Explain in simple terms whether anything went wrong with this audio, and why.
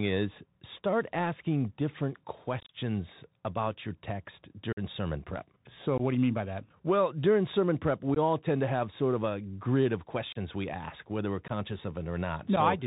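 The whole recording went through a Bluetooth CVSD headset codec, the old phone-call-grade link, so everything above 4 kHz is gone, s sounds turn scratchy and a grainy hiss sits underneath.

There's also unconcealed Bluetooth headset packet loss: bits of audio dropped between headset and phone and were replaced by silence or an idle pattern. You hear brief abrupt holes or clicks at 2.6, 4.73, 5.98 (just before "what do you mean"), 8.15, 10.32, 11.48 and 12.56 s. The first one, around 2.6 s, is a scattered cluster lasting about a tenth of a second.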